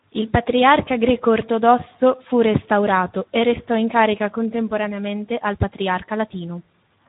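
It's a speech clip run through the Speex codec the whole way, and you can hear it plainly. There's nothing above about 3.8 kHz, so it has that narrowband phone-line feel, and the voice comes out hoarse and a bit noisy. That's CELP starved of bits for the excitation signal, and the amount of damage fits a low setting around 11 kbps, the kind of thing you'd get from old VoIP or game chat.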